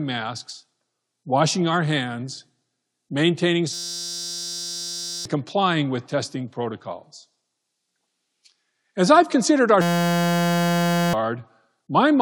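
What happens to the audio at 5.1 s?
At 5.1 s the speech is caught in a system hang loop running from 3.73 to 5.25 s, just before "complying with testing protocols". The system stalled while the audio hardware kept replaying one 5.8 ms buffer, which fits a 256-sample buffer. That tiny repeated slice becomes a steady buzz at about 172 Hz in place of roughly a second and a half of speech.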